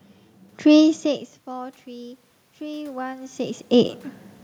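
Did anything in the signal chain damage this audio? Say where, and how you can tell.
Yes: automatic gain rising in call processing, 0.76 to 3.99 s, climbing about 5 dB. The waveform envelope and the spectrogram's room-noise floor swell together, gradually.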